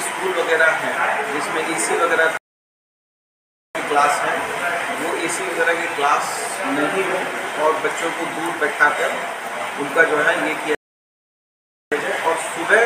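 Rebuffering stalls occur at 2.37 s and 10.75 s: playback ran out of downloaded audio and froze, dropping to silence for 1.38 s and 1.17 s. Each time the sound then resumes exactly where it stopped, so nothing is lost, only time added.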